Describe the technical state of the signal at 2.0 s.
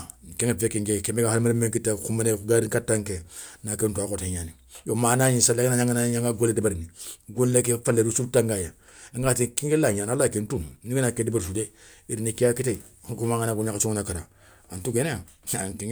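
At 2.0 s the signal is intact, with no fault audible at that moment.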